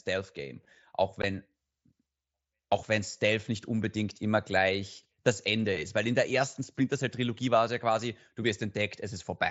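A speech recording with one brief dropout at about 1.22 s, where the sound cuts to silence for roughly 15 ms with hard edges. This is unconcealed Bluetooth headset packet loss: audio packets between headset and phone went missing and nothing filled the gap, a length that fits two lost frames. The link runs the mSBC headset codec, whose wideband band limit up to 8 kHz can be heard throughout, with light graininess on loud sounds.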